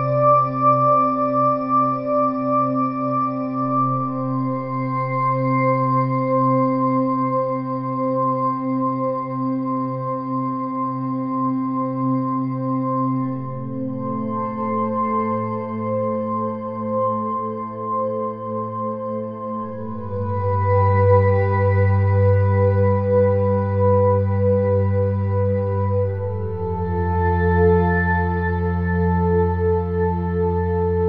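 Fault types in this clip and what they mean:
Nothing stood out on listening to this audio.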